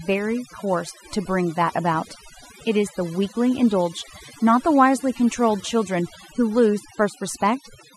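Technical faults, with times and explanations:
Throughout, overdone noise removal: aggressive suppression gates frequency bands near the noise estimate, leaving near-silent gaps with twinkling artefacts, and quiet components of the speech vanish.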